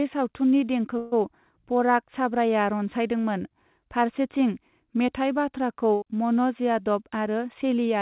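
Speech, passing through a narrowband call path that fits G.711 mu-law at 64 kbps, with nothing above 4 kHz, carries two bursts of packet loss. From 0.98 to 1.14 s about 140 ms of audio is gone, and from 5.94 to 6.04 s, right after "मेथाइ बाथ्राखौ", about 80 ms. The receiver filled each gap by repeating and fading the last sound. On a spectrogram this shows as smeared, fading horizontal bands followed by an abrupt jump, and on the waveform as a decaying repeated pattern.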